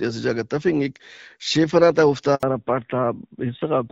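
At 2.35 s the speech cuts out in a handover gap lasting 80 ms, to 2.43 s. The call was passed between networks and no speech frames arrived during the switch, so the sound drops away quickly and stays silent until the new link picks up.

From 2.43 s to the end, the call shows a fallback to narrowband. The earlier HD Voice path, which sounds consistent with AMR-WB at around 12.65 kbit/s with light coding damage, gives way to a narrowband codec. Everything above 4 kHz disappears, and the speech turns duller and rougher, in keeping with AMR-NB at a rate near 7.4 kbit/s.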